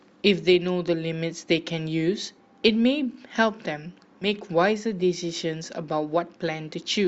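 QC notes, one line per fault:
2.37 s, compressed frames skipped: the sound jumps forward by roughly 70 ms, about three frames' worth, which fits a 20 ms frame size.
4.21–4.26 s, compressed frames skipped: same thing again, a smaller jump of around 40 ms, so a couple of frames missing or rejected by the decoder. It's another hiccup where the audio lurches ahead.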